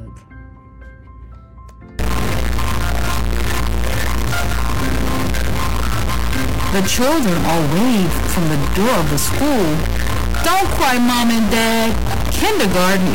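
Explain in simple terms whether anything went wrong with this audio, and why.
From about 1.99 s to the end, the sound turns harsh and buzzy, and even quiet gaps fill with a fairly loud hiss. This is most likely a stuck bit: one digit of the digital signal is frozen, so about half the values land wrong.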